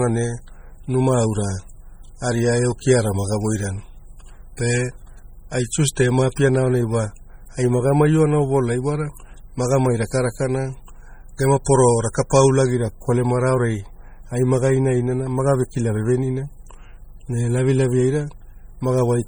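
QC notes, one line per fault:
Throughout: MP3 compression. The speech sounds watery and swirly, with metallic chirping on s sounds and smeared attacks, likely from heavy MP3 coding at a bitrate that fits 32 kbps. On a spectrogram, weak bands flicker on and off in patches, with nothing above 21 kHz.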